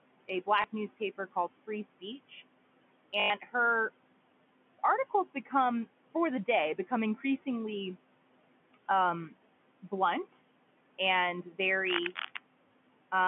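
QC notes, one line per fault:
0.62 s and 3.2–3.3 s, packet loss with last packet repeated: at 0.62 s, just before "newspaper called", there's a single 20 ms hiccup where a chunk gets played twice, heard as a small blip. The one at 3.2 s is worse. A 100 ms stretch is held by looping the last bit, which fits about five 20 ms packets. Because the loop repeats every 20 ms, the run buzzes at roughly 50 Hz, a quick robotic stutter.
5.1–5.53 s and 11.43–11.59 s, speech cut by the noise suppressor: the suppressor mistakes soft parts of the speech for background and turns them down along with the background. In the first spot, right before "for the day become", about 150 ms dips by up to about 11 dB. The second loses around 100 ms, pulled down by up to about 9 dB. Both sound swallowed and faint.
11.85–12.39 s, cable scratch noise: just after "um blunt and", a half-second burst of dense, uneven scratching lands over the speech, only about 5 dB below it. 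It has the rough, rustly texture you get when a contact's resistance jumps around. The likely cause is a worn cable, connector or control being moved during recording, all sitting on top of the narrow telephone-band sound.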